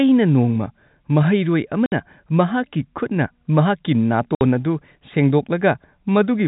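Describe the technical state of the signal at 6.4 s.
At 6.4 s the speech is intact, carried cleanly through the G.711 telephone coding with no fault in the signal at that moment.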